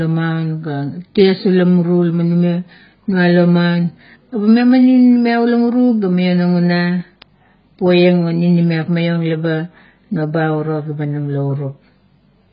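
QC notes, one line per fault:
throughout: AAC compression. The speech sounds dull and smeared, with a warbly, fizzy edge on sibilants and nothing above about 5.1 kHz. The heavy damage points to a very low bitrate near 12 kbps, likely from AAC-LC encoding that discards bands and lowers the cut-off.
0.43–12.42 s: word clock ticks. Sharp ticks of uneven strength repeat at a steady rate of roughly every 0.4 s, around thirty in all. An unlocked receiving clock, off by something like 50 ppm, drops or repeats one sample each time the clocks slip.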